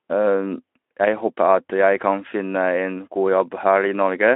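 Speech, with nothing technically wrong to report.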